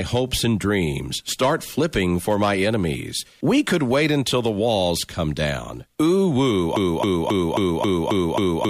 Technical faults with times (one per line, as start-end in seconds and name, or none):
6.76-8.70 broken-record loop